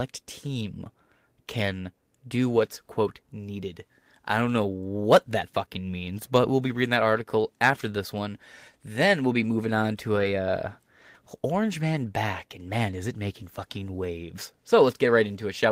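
Speech with lost packets rebuilt from error correction at three points: 1.49 to 1.55 s, 2.65 to 2.67 s and 10.15 to 10.25 s. About 40, 20 and 60 ms of audio are affected, which fits one to three lost 20 ms frames each time. Nothing drops out. Each lost stretch was replaced by the low-bitrate copy carried in the following packet, so those moments play rougher and noisier. This differs from plain loss concealment, which leaves a smeared, buzzy guess, or from a gap of silence.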